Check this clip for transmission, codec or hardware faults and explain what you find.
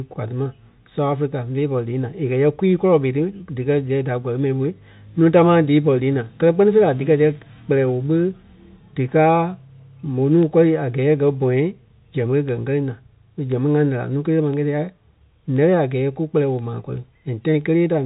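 One fault is present: periodic USB or driver dropouts. From 7.35 s to 17.61 s, regular ticks recur every 1.02 s. Each is a tiny sliver of silence, a fraction of a millisecond, left where a background task stalls the audio driver. The G.711 telephone coding, with its band ending near 3.8 kHz, is not a fault.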